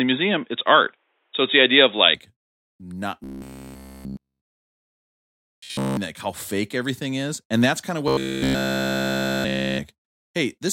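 An input switched to a poorer device affects this speech clip from the start to 2.15 s, likely the recording path running on a lesser microphone or a headset call profile before moving to the proper input. The voice sounds dull and boxy, sits a few dB off in level, and carries a faint extra noise floor. It then opens up at 2.15 s with no gap at the changeover. Robotic sound from repeated short buffers follows from 3.24 to 5.97 s, ending just before "like how fake everything," and again from 8.08 to 9.80 s, right after "that's kind of." In both stretches the voice takes on a rigid metallic buzz at 66.7 Hz. That fits a 15 ms buffer being replayed over and over while virtually all the fresh audio is skipped, likely because the input stream was starved.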